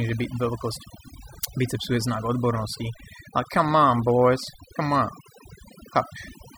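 Speech with overdone noise removal throughout: bands near the noise are cut individually, leaving twinkling specks in near-silent gaps, unlike a gate's whole-signal cuts.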